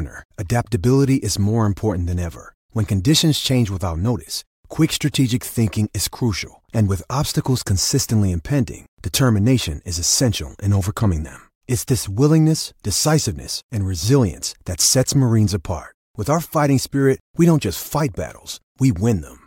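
No technical faults can be heard in this recording.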